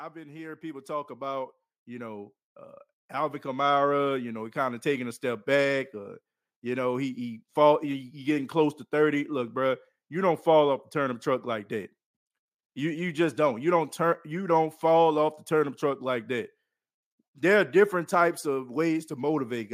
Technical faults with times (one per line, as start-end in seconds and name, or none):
0.13-8.16 automatic gain rising